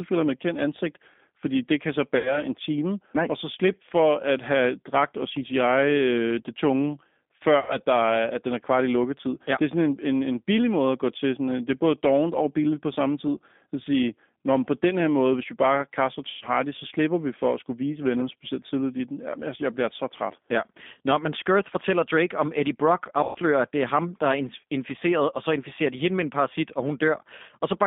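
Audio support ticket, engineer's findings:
G.729 codec throughout: line band around 200 Hz to 3.6 kHz, plainly rough and synthetic speech, consistent with G.729A at 8 kbit/s rebuilding the voice from filter, pitch and sparse pulses.

VoIP packet loss concealed by the speech codec at 2.17–2.43 s and 7.60–7.78 s, 80 ms gaps each, plus 16.29–16.45 s and 23.23–23.38 s, 120 ms each. The decoder stretches the last pitch and filter into a fading buzzy tone or coloured noise, and the voice stays weak briefly afterwards.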